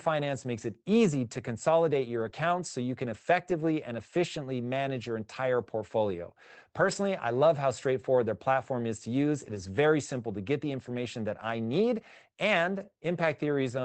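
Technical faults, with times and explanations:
1.31, 2.19, 3.05, 6.79 and 9.47 s, lost packet rebuilt from error correction: 40 to 100 ms stretches turn rough and noisy instead of dropping out, because low-bitrate backup copies in following packets filled the gaps.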